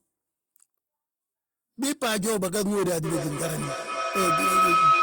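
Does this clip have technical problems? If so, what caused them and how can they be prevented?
Yes. A feedback howl runs from 3.04 s to the end: two devices share a room, and the microphone-to-loudspeaker loop regains level each pass, building to a tone near 1.5 kHz that pulses about every 300 ms and peaks about 7 dB above the speech. Joining the call from only one device in the room, or muting the second device's microphone and speaker, prevents it.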